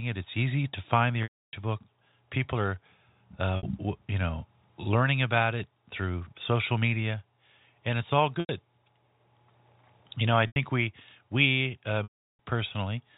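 Packet loss with pitch repetition hits five times. At 1.23 s, just after "easy to find the", roughly 300 ms drops out. The receiver loops the last pitch period, lets it fade to silence, then cross-fades back in. Shorter gaps at 3.57 s (60 ms), 8.4 s after "and it's all" (90 ms), and 10.47 s between "know I" and "we we uh" (90 ms) each sound like a brief buzzy hold. At 12.03 s a 360 ms loss fades out completely. All of this sits on a 4 kHz-limited G.711 telephone line.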